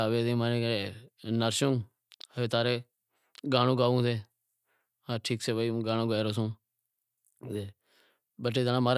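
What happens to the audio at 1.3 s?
Nothing goes wrong at 1.3 s; the speech carries on intact through that moment with no dropout, click or distortion.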